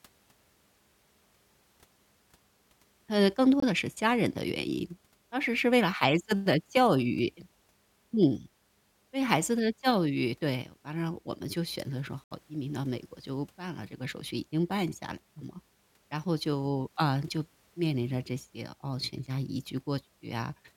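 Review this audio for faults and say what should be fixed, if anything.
Silent gaps at 3.60–3.64 s and 12.24–12.32 s are Bluetooth dropouts, likely late packets discarded; playback resumes 23 ms and 70 ms further on. To prevent this, keep the headphones near the source and clear of 2.4 GHz interference.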